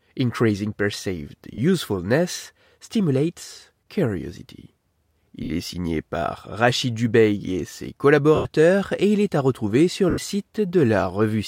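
Lost LE Audio frames at 1.54–1.58 s, 5.44–5.50 s (before "est signé par"), 8.35–8.45 s (before "et il est à") and 10.10–10.18 s (after "est à retrouver sur"): the decoder refills each 40–100 ms gap with a sign-scrambled repeat of the last spectrum, heard as a brief noisy smear that fades on the longer gaps.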